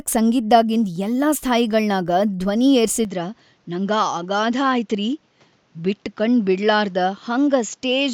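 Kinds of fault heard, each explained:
Input switched to a poorer device: at 3.05 s the input was likely moved to a lower-grade microphone, so the speech abruptly loses everything above 7.6 kHz, turning duller and about 5 dB quieter, with a faint new background noise and no gap.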